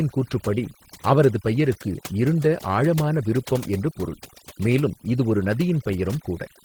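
The speech runs with two faults throughout. Overdone noise removal has pushed the background down, breaking it into twinkling specks. Frequency bands that sit near the estimated noise are cut hard, so quieter parts of the voice vanish too. Opus voice compression is also plainly audible, and the hoarse, slightly robotic grain fits about 16 kbps with 20 ms frames. The band reaches about 20.2 kHz, which points to hybrid mode, with linear-prediction coding below 8 kHz and a transform layer above. At that bitrate the excitation is coded coarsely.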